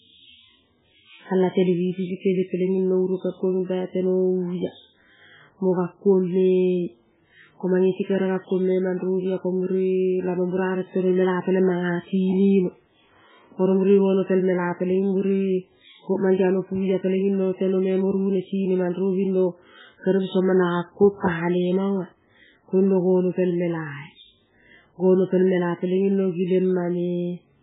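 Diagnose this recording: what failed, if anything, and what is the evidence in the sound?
The codec stage likely starved heavy MP3 compression of bits, consistent with roughly 8 kbps. The speech has nothing above 3.8 kHz throughout and sounds watery and swirly.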